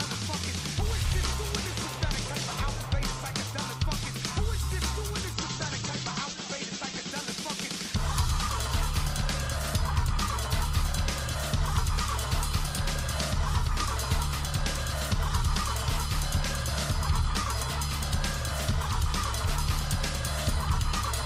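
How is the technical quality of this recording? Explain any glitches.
One glitch mars the recording: a call bitrate drop from 5.35 to 7.19 s. The encoder's bit budget fell sharply, which points to roughly 48 down to 10 kbps. The sound turns coarse and watery, and the top end is cut from 20 kHz to 8 kHz. Unlike packet loss, nothing drops out, and the sound clears by 7.19 s.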